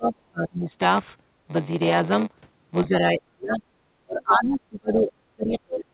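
Block size mismatch (padded) runs through the whole clip. The stage after the writer reads 512-sample blocks but receives about 6% less in each one, which fits 480-sample writes. The shortfall is filled with silence, so a tiny gap repeats at about 93.8 Hz and is heard as a rough buzz riding on the speech. The speech also runs slower, at 0.938 times normal speed, yet its timbre stays put. A resampling error would drop the pitch along with the speed, and mains hum would sit steady under silence rather than chopping the sound itself.

From 0.00 to 0.69 s the speech dips, by up to about 30 dB. This most likely comes from speech suppressed in double talk, where an echo canceller turns the near talker down while the far side is speaking. It happens again from 2.86 to 3.62 s and from 4.02 s to the end, where the drops reach about 40 dB. These are reductions that follow the overlap. That sets them apart from packet-loss gaps, which are short dropouts tied to lost packets. 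Throughout, the G.711 mu-law call path keeps the band below 4 kHz.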